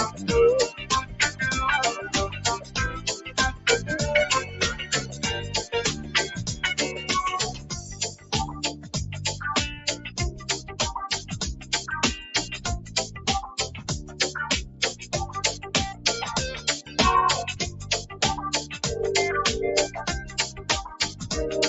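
Throughout, the level pumps and held sound thins while onsets survive, swinging by roughly 15 dB: a speech-tuned noise suppressor applied to music or sounds is treating steady content as noise. Sound cut by the noise suppressor sinks by about 7 to 11 dB, with sustains and decays dropping away, at 0.8–1.4 s, 2.29–3.66 s, 4.44–5.23 s, 5.95–8.93 s, 9.75–11.72 s, 12.52–16.05 s, 16.82–18.78 s and 20.21–21.26 s.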